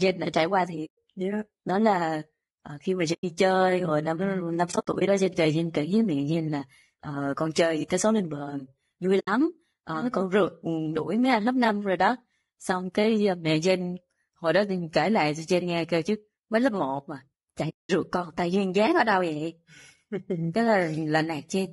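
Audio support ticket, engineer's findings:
Grainy, rough speech throughout, with noise between harmonics and a synthetic-sounding top band. Likely low-delay AAC compression (AAC-ELD); short frames resolve harmonics poorly, and the damage fits a low bitrate around 32 kbps.

Soft-edged silent holes: 0.85–0.98 s after "đã trải qua"; 3.13–3.24 s before "chơi hồi năm ừ"; 4.71–5.08 s, scattered dropouts after "hồi năm ừ năm"; 9.19–9.28 s; 17.69–17.90 s. AAC frame loss with muting: the decoder zeroes lost frames, and the overlapping windows fade each gap out and back in.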